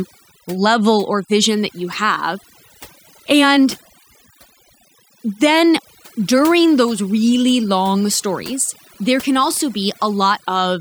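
Throughout the clip, overdone noise removal is at work: a noise reduction stage set too aggressively keeps cutting individual frequency bands whenever they sit close to its noise estimate, so the background drops and breaks up into twinkling specks, and quieter parts of the speech vanish.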